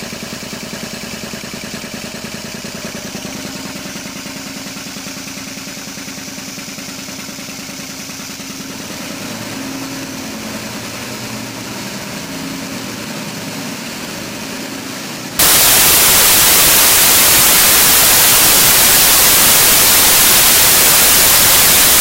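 From 15.39 s to the end at 22.01 s, the audio turns into loud, harsh broadband noise: samples built from the wrong bytes. Each value is being assembled with its bytes misplaced, so the rapidly changing low bits become the dominant part and the signal is buried.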